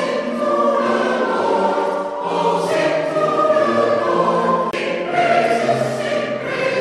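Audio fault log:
4.71 to 4.73 s, CD skip: the laser jumped to another turn of the disc's spiral, so playback muted for roughly 20 ms and resumed elsewhere, giving a tick and an abrupt break. The waveform shows a brief flat gap; the spectrogram shows a thin broadband vertical stripe.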